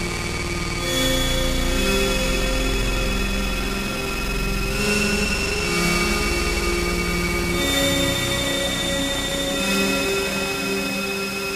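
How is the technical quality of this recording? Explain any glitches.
One glitch stands out near the end. From 9.88 to 10.91 s there is a train of clicks. About 20 sharp pulses arrive at an uneven pace, near 19.7 per second. They peak a few decibels above the sound and tick over it. Electrical interference or a faulty connection is the likely cause.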